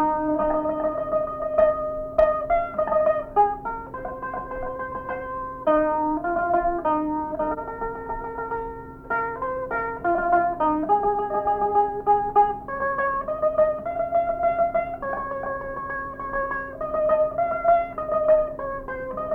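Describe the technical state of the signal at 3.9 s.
At 3.9 s the signal is intact, with no audible dropout, distortion or other fault at that moment.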